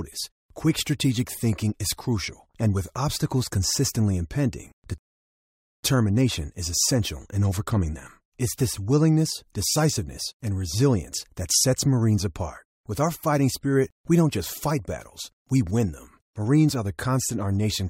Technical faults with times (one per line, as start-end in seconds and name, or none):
4.98-5.83 rebuffering stall